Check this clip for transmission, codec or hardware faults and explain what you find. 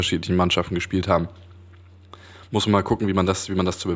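Nothing wrong turns up here; the speech comes across steady and intact, with no transmission, codec or hardware trouble to point to.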